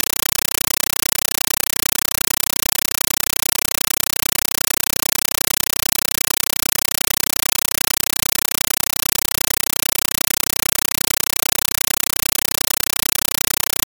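From start to finish, the audio is replaced by very loud, chattering static: a compressed stream played as audio. An AC-3 (Dolby Digital) bitstream has reached the output as if it were ordinary samples, so each coded frame plays as a burst of noise about 8 ms long, followed by silent padding, repeating 31.25 times a second, which fits a 384 kbps stream. That steady, rigid burst-and-gap rhythm sets it apart from broadband hiss or overload distortion.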